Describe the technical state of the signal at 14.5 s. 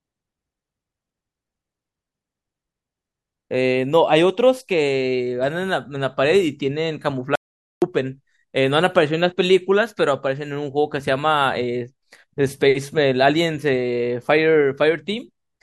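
At 14.5 s the speech signal is intact, with no audible fault at that moment.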